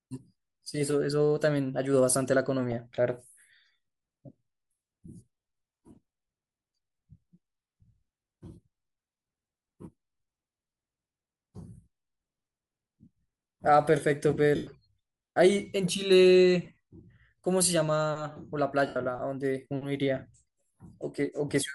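A speech recording with a coarse, grainy quality from start to finish. The upper frequencies sound breathy and noisy rather than clean. This points to Bluetooth LC3 compression, likely at a rate around 48 kbps with 7.5 ms frames. The codec discards much of the top band and fills it with noise, and here that damage is plainly audible. Three short breaks come from lost LE Audio frames. The first runs from 14.55 to 14.67 s, about 112.5 ms. The second, from 16.65 to 16.77 s, scatters 67.5 ms of loss over 120 ms, with the longest gap around 40 ms. The third runs from 18.87 to 18.96 s, about 90 ms. In each gap the decoder repeats the last spectrum with random signs, so the sound turns into a noisy smear that fades as the gap lengthens.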